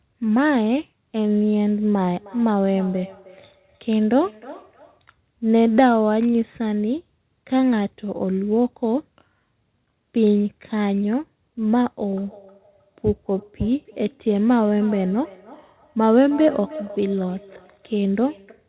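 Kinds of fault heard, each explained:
Feedback echo between two devices: one device replays what the other's mic sent, that mic picks it up again, and neither echo canceller catches it. Here the speech keeps coming back roughly every third of a second, from 1.94 to 5.06 s and from 12.17 s to the end, peaking about 18 dB below the speech.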